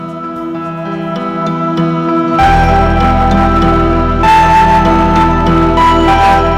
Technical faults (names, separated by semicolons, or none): hard clipping